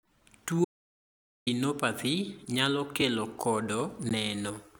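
Speech with an audio dropout to silence from 0.65 to 1.47 s: about 0.82 s vanishes into a flat-line waveform and blank spectrogram, likely from a lost input feed. Two blocks of digital silence, 2.2 ms at 3.01 s and 15 ms at 4.09 s, cut in abruptly as zeroed buffers, showing as notches with vertical broadband streaks.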